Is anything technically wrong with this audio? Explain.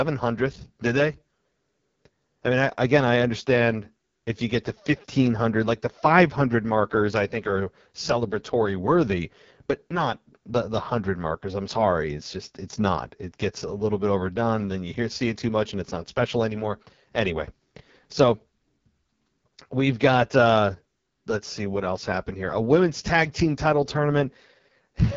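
Yes. AMR wideband (HD Voice) codec damage runs through the whole speech clip. The codec models the voice up to 6.4 kHz as pulses driving a vocal tract filter, then fills the band above with shaped noise. Nothing reaches beyond about 7.2 kHz. The coding is heavy, and the speech sounds rough and raspy, which fits the codec's lowest mode, around 6.6 kbit/s, where too few bits are left to capture the voice's fine detail.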